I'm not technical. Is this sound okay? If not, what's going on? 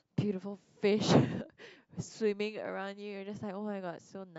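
Yes, this is fine: nothing in the speech points to a technical problem with how the audio was captured or stored.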